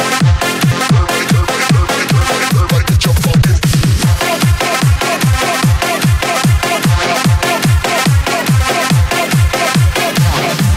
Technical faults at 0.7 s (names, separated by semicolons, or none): skip ahead